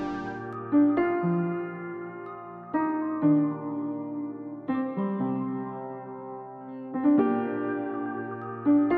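No technical faults can be heard anywhere in the audio, so there is nothing to describe in time order.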